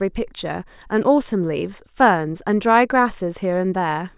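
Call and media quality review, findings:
No findings on this speech clip. Nothing to attribute to capture, transport or playback.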